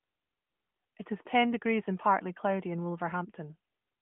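No faults found in the speech: the AMR narrowband mobile codec path is working normally, with audio held to a line band of about 150 Hz to 3.4 kHz and the light codec coloration that fits a 12.2 kbps mode.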